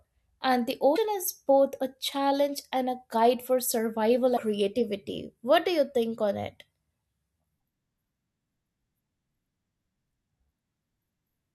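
At 0.95–0.98 s, between "and the" and "is both a challenge", and at 4.36–4.39 s, after "a guide for survival", the speech jumps forward through a brief garbled glitch. The likely cause is a broken MP3 bit reservoir. After a cut, the decoder pulls borrowed bits from the wrong frame, corrupting roughly one 24 ms frame.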